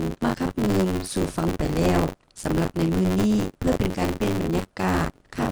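Buffer tearing runs throughout, heard as a steady robotic buzz near 93.8 Hz whenever sound is present, which fits a 512-sample buffer. Writer and reader have slipped, so roughly a third of each buffer replays audio about 40 ms stale, hard-joined on both sides.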